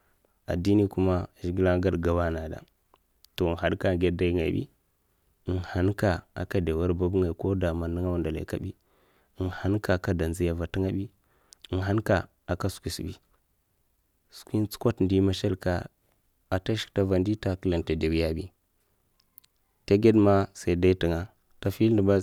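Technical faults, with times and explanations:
No technical faults heard.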